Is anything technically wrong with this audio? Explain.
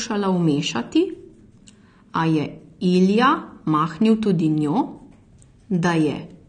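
Yes. Throughout, the speech was likely AAC compressed at a low bitrate near 32 kbps, which removes everything above 9.6 kHz and leaves it dull, smeared and plainly warbly.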